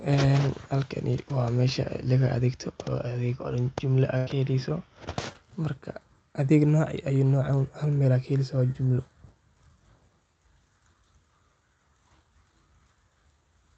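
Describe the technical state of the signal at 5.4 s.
Just before 5.4 s, from 5.33 to 5.36 s, there is a short concealed packet loss. About 20 ms of the speech did not reach the decoder in time. The receiver covered the gap by extending the preceding sound for roughly 17 ms, then crossfaded back into the real signal. It is heard as a brief smear or wobble, and a quick consonant there may drop out. The call codec also limits the bandwidth to about 8 kHz.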